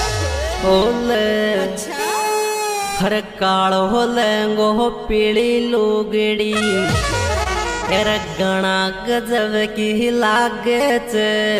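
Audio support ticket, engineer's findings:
Short concealed packet loss, 7.43–7.47 s: brief smear/wobble. About 20 ms of stream missing, decoder synthesised a fill extending prior sound, then cross-faded back. Spectrogram: short blurred, repeated-looking slice; waveform: smoothed patch.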